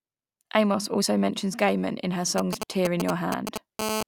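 From 2.38 s to 3.81 s, a galloping dit-dit-dit pattern of short 217 Hz buzzes cuts across the speech at roughly the same loudness as the voice. These are GSM signalling bursts: a 2G phone close by is transmitting brief clusters of radio pulses at a rate of about 217 per second while it negotiates with the network, and the audio circuitry rectifies that radio energy into sound.

At 3.82 s the pattern turns into a continuous hard buzz that lasts until 4.03 s. It sits at 217 Hz with a dense stack of harmonics, about 2 dB below the speech and unrelated to it. This is GSM phone buzz. The phone has moved into a call and transmits its bursts without a break, so the rectified pulses now form a constant drone instead of intermittent groups.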